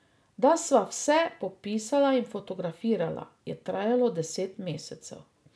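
No technical faults can be heard anywhere in the speech.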